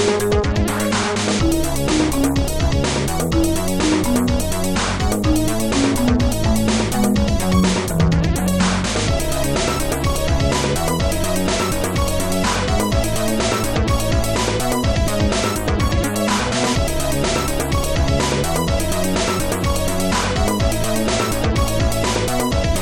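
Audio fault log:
Nothing stood out on listening through this clip.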